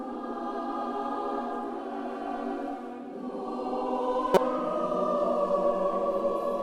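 Around 4.34 to 4.37 s there's a quick blip, roughly 40 ms long, and that's damaged data in a compressed stream. A patch of the encoded file got corrupted, with bytes dropped, zeroed or overwritten by something else. The decoder either misread those frames or threw them out, lost its place, and had to hunt for the next valid frame header before it could lock back on. That's why you hear a short glitch right at that spot.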